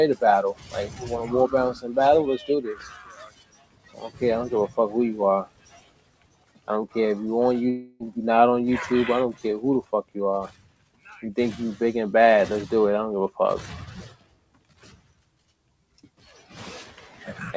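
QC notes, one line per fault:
Throughout, noise suppressor applied to music or sounds: a suppressor tuned for speech stays active across the whole clip and treats sustained tones, ambience and reverb tails as noise. The gain it removes swings by roughly 15 dB, so held material and decays sink while onsets pass. The level rises and falls with each sound rather than staying steady. That steady presence separates it from the discrete cuts listed below. Above 8 kHz nothing remains, which fits a G.722 call path at 64 kbps.
0.54–1.07 s, 2.69–4.21 s, 5.45–6.69 s, 9.83–10.16 s, 10.48–11.07 s and 14.08–16.55 s, sound cut by the noise suppressor: in these six stretches the suppressor judges the sound to be noise and pulls it down harder than elsewhere. The deepest drop is about 13 dB in the first stretch and about 15 dB in each of the others. Steady or decaying parts sink or lose their tails, while sudden attacks still come through. 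The longest stretch is 14.08–16.55 s. Unlike a dropout, the sound thins but never stops, and it does not turn into a synthetic continuation.
7.70–8.03 s, long network dropout: for about 0.3 s the material stops progressing. The last sound carries on as a fading buzz or hiss, with no silent gap, and the audio then resumes further along with roughly 300 ms missing. This is likely a network dropout concealed by the receiver. The invented continuation and the jump in content tell it apart from a suppressor dip, which lowers real sound without skipping any.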